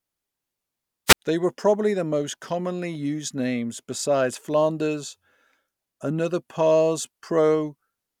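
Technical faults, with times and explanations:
1.07–1.19 s: wireless microphone squelch dropout. The radio link fades, hiss rises briefly, then squelch mutes the receiver for about 64 ms before the speech returns.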